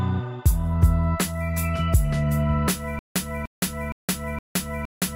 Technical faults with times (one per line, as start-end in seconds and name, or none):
2.99-5.16 stutter with silent gaps